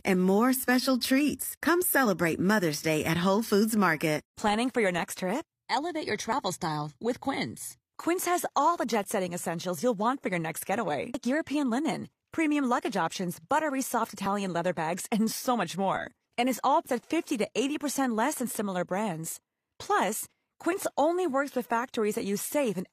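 Overlap between stream segments at 2.33, 4.33, 6.32, 8.27, 12.26 and 14.26 s: about 20 to 40 ms of speech gets trimmed at each 2-second segment join, leaving small skips.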